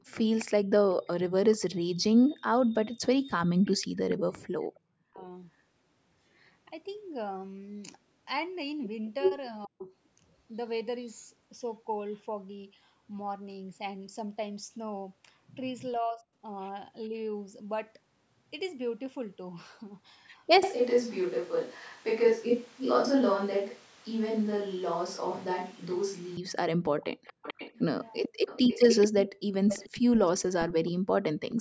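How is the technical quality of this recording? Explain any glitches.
The recording has several call-related glitches: repeated echo, speech dropouts and one stretch picked up from the wrong microphone.

Echo leak: from 3.65 to 4.21 s, 9.63 to 9.94 s and 26.99 to 31.55 s, a delayed copy of the speech trails it by 440 ms. It sits about 10 to 20 dB below the main speech and is loudest in the final stretch. The likely cause is a far end on loudspeaker whose echo canceller let part of the returning signal back into the call.

Speech suppressed in double talk: at 4.66 to 5.21 s, 9.66 to 9.89 s, 15.98 to 17.14 s, 21.90 to 22.43 s and 28.28 to 28.46 s, the speech dips sharply or vanishes, by about 30 to 40 dB at worst, for a few hundred milliseconds at a time. The echo canceller likely mistook overlapping talk for echo and turned everything down.

Switch to a distant microphone: from 20.63 to 26.37 s, the speech abruptly turns hollow and roomy, with thinner bass, a level about 5 dB lower and room noise about 25 dB under the speech. 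The close microphone's signal was likely lost, leaving a farther microphone to carry the audio until it cuts back. The call's band limit, with nothing above 8 kHz, is normal for this path.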